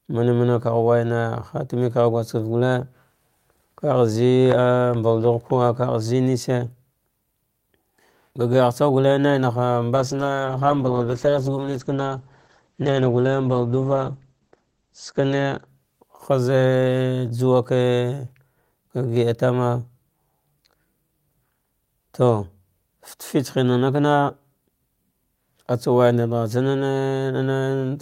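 From 9.96 to 17.25 s a call bitrate drop leaves the speech rough and watery, with treble capped near 8 kHz, fitting roughly 10 kbps; it recovers afterwards, unlike a fixed filter.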